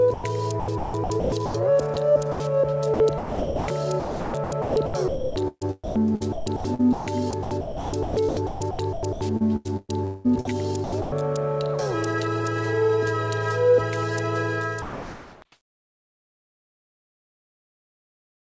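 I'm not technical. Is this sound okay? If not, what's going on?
No. The sound is chopped by the voice detector from 0.14 to 2.40 s and again from 2.94 to 11.12 s. Bits keep vanishing and coming back. About 0.7 s is lost in the first stretch and nearly 4 s in the second. The call likely had a detector deciding when to send, and it kept switching off on quieter parts.

At 14.82 s the sound is dropped by the voice detector. For 0.6 s it gives way to a flat hiss. The detector likely mistook real sound for background and stopped sending until it picked up again at 15.42 s.

From 14.82 s to 18.57 s there is comfort noise in place of the background. The natural surroundings are replaced by a plain, even hiss. It is likely filler made up by the receiving end while nothing was being sent. The whole clip also sounds dull, with nothing above 8 kHz, as the call's audio format keeps the upper range out.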